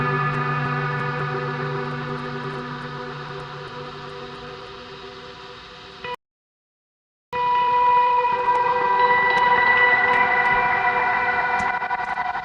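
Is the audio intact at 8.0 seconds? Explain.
No, 8.0 s falls inside a time-compressed catch-up from 7.33 to 10.33 s: the player trims and cross-fades tiny slices after a stall, so the sound runs about 1.1 times fast at normal pitch.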